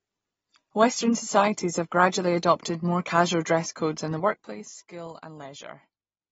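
AAC compression runs through the whole of this speech recording. Nothing is present above 7.7 kHz, and the codec damage is plainly audible as a dulled, smeared sound. The likely cause is an AAC-LC encode at a low bitrate, consistent with about 24 kbps, where the encoder quantises each frame's spectrum against a hearing model, lowers its cut-off and leaves gaps in the spectrum or fills bands with substitute noise. Zipper noise appears from 4.16 to 4.63 s, where the level falls by about 15 dB in 1 dB steps at roughly thirty a second. Because each increment is applied abruptly rather than ramped, every step leaves a small click, and these run together into a ticking, zipping texture riding on the speech for as long as the fade lasts.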